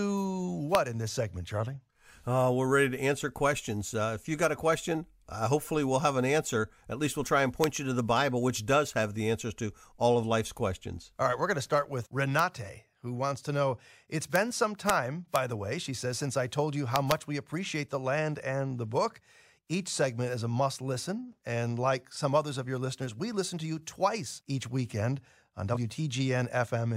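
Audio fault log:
0.75 s (just before "in this segment"), 7.64, 12.39 (after "going to start with"), 14.36, 14.89, 15.36 and 16.96–17.12 s, integer overflow: loud peaks pushed the sum at most about 1 dB past the integer ceiling. Instead of being held at the limit, the samples wrapped to the opposite sign and jumped across the full range, giving sharp cracks harsher than clipping.
25.73–25.77 s (after "twice each weekend on"), compressed frames skipped: roughly two frames were never decoded, so playback jumps ahead by about a tenth of a second, which fits frames of about 43 ms.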